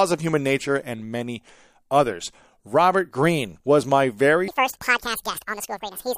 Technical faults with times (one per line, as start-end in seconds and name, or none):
4.48-6.18 section at the wrong speed